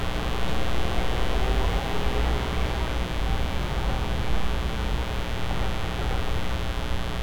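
A mains buzz runs throughout, fed by 60 Hz switching spikes, a raspy drone only roughly ten decibels under the sounds, showing as evenly spaced horizontal harmonic lines reaching into the kilohertz range.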